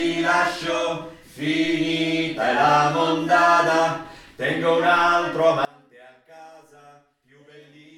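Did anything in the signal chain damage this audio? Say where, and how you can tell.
Yes. From 5.65 s to the end, the sound collapses to a faint residue, about 27 dB down. That points to one channel inverted, likely a polarity-reversed lead in the analogue wiring, so content common to both channels cancels when summed to mono.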